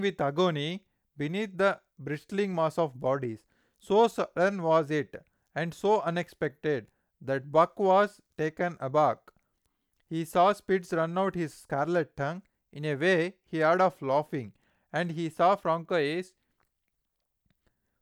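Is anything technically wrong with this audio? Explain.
Yes. Two dropped samples, at 9.12 s and 10.28 s, each sound as a single sharp click in the speech. The likely cause is a tiny fraction of a millisecond of the stream going missing at each point, so the waveform jumps straight from one value to a later one instead of moving smoothly between them. The gap is far too brief to remove any audible sound. Only the abrupt step is heard, as a thin vertical line across the spectrum.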